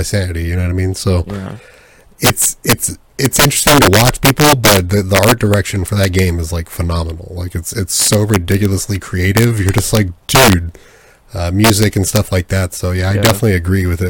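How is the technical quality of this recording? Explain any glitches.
The recording is marred by integer overflow throughout the speech. The signal is driven about 9 dB too hot, and instead of being limited, each peak past the integer ceiling wraps to the opposite sign. Around one percent of samples flip across the full range, producing violent, sharp cracks on loud syllables, harsher than ordinary clipping.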